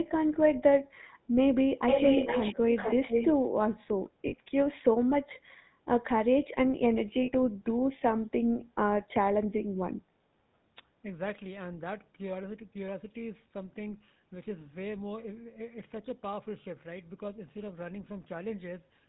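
Speech coded with the GSM full-rate codec throughout, and the codec damage is plainly audible: a buzzy, gravelly roughness laid over every phrase, consistent with the 13 kbps full-rate coder. The coder rebuilds the voice from a vocal-tract model excited by sparse, regularly spaced pulses, so fine detail is lost. On a spectrogram the energy stops hard at 4 kHz, with a blank band above it, and harmonics look smeared and grainy rather than clean. Between 1.88 and 2.57 s, and again from 2.75 to 3.39 s, a second copy of the speech trails the original by 452 ms at roughly the same loudness. This is an echo leak, likely from a far end on loudspeaker whose echo canceller let its own microphone pickup return down the line. A spectrogram shows the speech patterns repeated, shifted about half a second to the right and overlapping the direct sound, and the waveform's envelope doubles up over those spans. 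There are lost GSM frames at 4.28 to 4.34 s (40 ms), 7.22 to 7.31 s (60 ms) and 10.06 to 10.09 s (20 ms). Each gap is filled by repeating the last good frame, heard as a brief rough, metallic hold. On a spectrogram these appear as short, frozen, horizontally streaked patches, and in the waveform as a small repetitive block.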